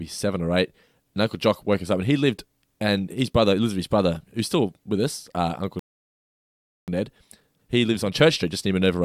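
A speech recording cuts out partway through, then rushes to recover. The first fault is a playback stall. At 5.79 s the sound stops dead in mid-flow. Silence holds for about 1.08 s, until 6.88 s. The likely cause is a player that ran dry of buffered data, or whose audio thread was blocked. Output resumes once the data arrives again. The second fault is time-compressed catch-up. It runs from 6.88 s to the end of the clip. The player sheds the backlog built up during the stall. It does this by dropping tiny slices of audio and cross-fading over the joins. The speech plays about 1.1 times faster than normal. Pitch stays where it was, so it sounds hurried rather than higher.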